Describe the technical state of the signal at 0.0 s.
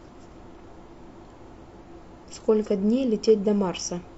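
At 0.0 s the signal is intact, with no fault present at that moment.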